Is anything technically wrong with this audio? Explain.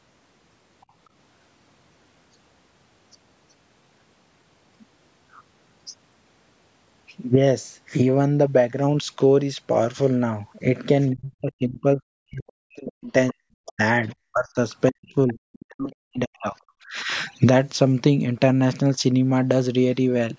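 Yes. Faint scraps of a second voice appear at 0.81–0.86, 12.47–12.52, 13.66–13.72, 15.28–15.34 and 17.29–17.33 s. They run very quiet early on and are clearest around 15.3 s, likely the other side's voice leaking through past an incomplete echo canceller.

From 11.13 to 14.59 s and 14.9 to 17.1 s, the speech dips and cuts out in pieces, falling by as much as about 40 dB. This is likely speech suppressed in double talk: with both sides talking at once, the canceller turned everything down.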